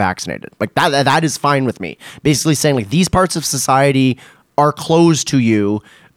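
No technical faults are audible.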